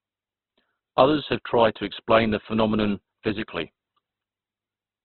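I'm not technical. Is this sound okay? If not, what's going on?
No, not quite. The whole clip has the rough, grainy sound of heavy Opus compression, likely from squeezing the file very small. Everything above about 4.3 kHz is gone, so the speech sounds dull, like a phone call, and its tone turns noisy and sandpapery.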